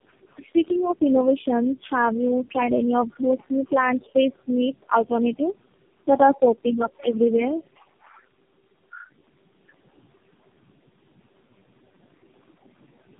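A speech recording carries tandem speech coding from start to finish. It sounds like a low-rate AMR-NB link, then G.729A, then AMR-NB again, joined by G.711 hops. Each of the three speech coders re-encodes the previous one's errors, so the roughness, muffling and warble compound. The band stops at about 3.7 kHz throughout. The room noise sits about 22 dB below the speech.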